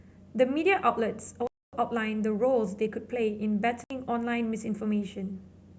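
At 1.47 s the speech drops into a block of digital silence lasting 256 ms, and again at 3.84 s for 64 ms: the output buffer likely went unfilled in time, a late render. The sound cuts out and back at both edges with no fade, marking a hole in the audio rather than a quiet passage.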